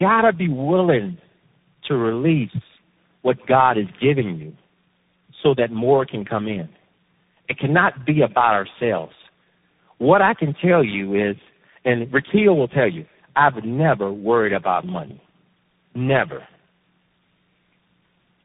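Throughout the speech, tandem speech coding is audible. The roughness and warble suggest about four speech codecs in a row, each re-encoding the previous one's damage, and nothing survives above 3.8 kHz. Unlike a single low-bitrate codec, the artefacts compound into layered, smeared grit.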